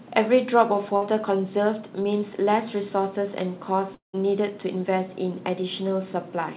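Speech carried over a narrowband call path, with nothing above 4 kHz, consistent with G.711 mu-law at 64 kbps, and three packet-loss faults.

At 0.96 to 1.03 s there is a burst of packet loss. About 60 ms of audio never arrived, and the receiver covered roughly 53 ms of it by extending the preceding sound and fading it down. The result is a brief held buzz or hiss, and then the speech picks up slightly further along with a short section missing.

At 2.03 to 2.06 s a short concealed packet loss leaves about 20 ms undelivered. The decoder patched around 10 ms by continuing the last waveform and cross-fading back into real audio, so it comes through as a momentary smear or wobble rather than an obvious gap. A brief consonant in that spot could be swallowed.

From 3.94 to 4.19 s the signal breaks off for much longer, likely a network dropout. About 200 ms of audio is lost. The receiver first stretches the last sound into a decaying buzz or hiss, then gives up, leaving roughly 140 ms of silence before speech resumes. 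The returning audio starts later in the utterance than where it cut out, with the intervening material gone.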